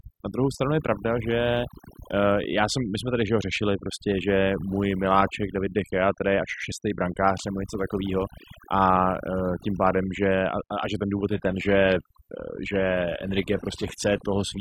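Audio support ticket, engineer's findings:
Overdone noise removal, whole clip. Background drops, breaking up into twinkling specks. Noise reducer set too aggressive, pulling individual frequency bands down or off near its noise estimate and taking quiet speech detail with them.

Adaptive stream at a lower bitrate, from 11.29 s onward. Abrupt, gapless quality drop: top end gone above 14.9 kHz, codec artefacts up. Player switched renditions on a slowed connection, which fits a fall to a low-bitrate HE-AAC-style stream.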